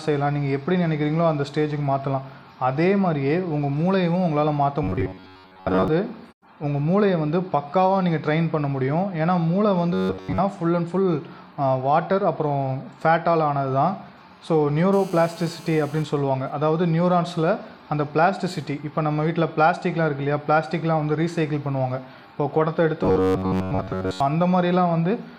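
From 4.83 to 5.88 s the sound turns robotic, with a rigid metallic buzz at 93.8 Hz. The likely cause is repeated short buffers: audio arrives too seldom, so chunks of about 10.7 ms are replayed and most of the real audio is skipped.

The same robotic buzz returns from 9.93 to 10.38 s.

From 14.93 to 16.03 s a hard, raspy GSM phone buzz appears at 217 Hz, about 23 dB below the signal. A nearby 2G phone in a call is pulsing, and the audio circuit rectifies those bursts.

From 16.04 to 16.89 s faint GSM signalling bursts follow as even ticks with a longer 217 Hz buzz twice a second. The phone is still in the call, but its user is silent, so it transmits only in sparse groups.

The same robotic buzz returns again from 23.03 to 24.20 s.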